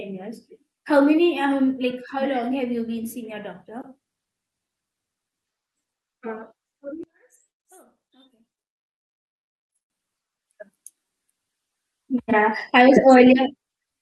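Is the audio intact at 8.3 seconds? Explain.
No. At 8.3 seconds the speech sits inside a stretch from 7.03 to 9.90 s where it collapses by about 30 dB, leaving a faint residue. The likely cause is one channel inverted: with one side's polarity flipped, the centred speech common to both channels cancels when the pair is folded to mono, and only the small difference between left and right survives until 9.90 s.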